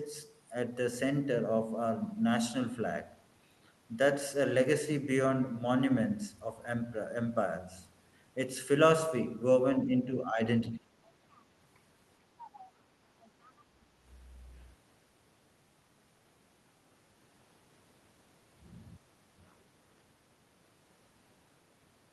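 From 9.84 to 10.41 s, and again from 10.6 to 10.93 s, the talker's level dips sharply. The drops reach roughly 10 to 15 dB. This is speech suppressed in double talk. Both sides likely spoke at once, and the echo canceller turned the talker down with the echo.

Brief traces of another voice then appear at 11.34, 12.55 and 13.44 s. This is the other side's voice leaking through. Each trace is faint and short, far below the talker. The likely cause is loudspeaker echo the canceller did not fully remove.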